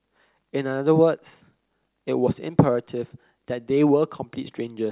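Nothing technically wrong turns up anywhere in this short bit of speech, so there's no fault here to pin to a time or trace back to a cause.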